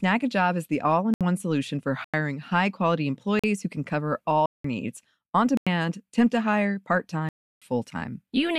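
Speech drops out abruptly at 1.14 to 1.21 s, 2.04 to 2.14, 3.39 to 3.44, 4.46 to 4.64, 5.57 to 5.67 and 7.29 to 7.62 s: blocks of digital silence, likely where unfilled output buffers were zeroed, the 93 ms gaps each 4096 samples long.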